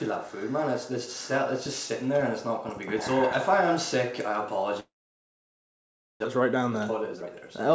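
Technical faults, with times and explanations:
4.80–6.26 s: long network dropout. The audio breaks off and the receiver carries the last sound on as a brief fading buzz. Roughly 1.3 s of near silence follows. About 1 s of material never returns. This is likely a network outage of some length, with the stream resuming later without the lost part.
6.40–7.70 s: jitter buffer speed-up. After the gap the audio runs about 115% fast at unchanged pitch and sounds hurried. The receiver cuts short pitch-period pieces again and again to drain the backlog. Roughly 0.2 s is removed, pulling the delay back down.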